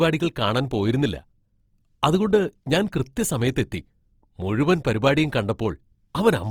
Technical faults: Opus compression

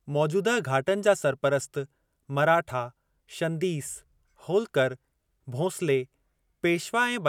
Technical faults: none

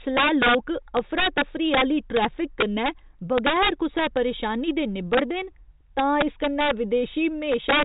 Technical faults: integer overflow

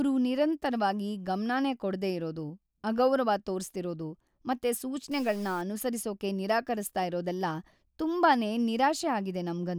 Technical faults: stuck bit

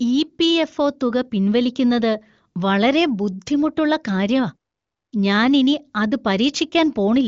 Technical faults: none

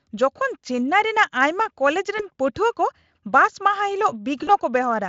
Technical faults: VoIP packet loss concealed by the speech codec

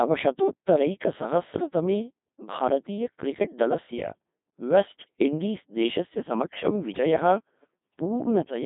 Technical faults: Codec 2 vocoder

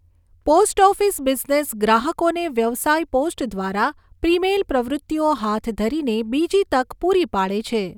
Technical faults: none

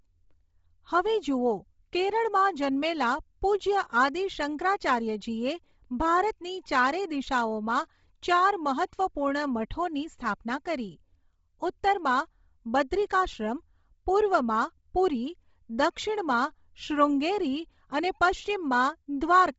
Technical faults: Bluetooth LC3 compression

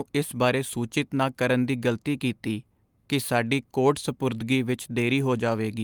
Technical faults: none

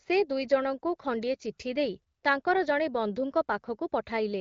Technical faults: none

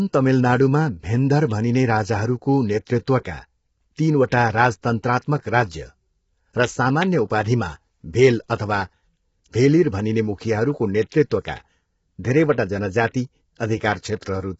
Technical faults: low-delay AAC compression; pre-echo

